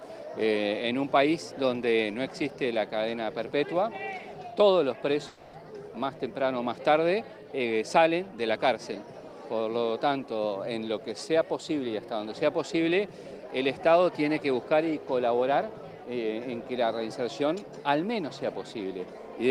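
From 5.27 to 5.55 s the sound gives way to a smeared, fading buzz for about a quarter of a second, then resumes with that stretch simply gone. This is likely a long network dropout, with the receiver extending the last audio to cover the missing packets.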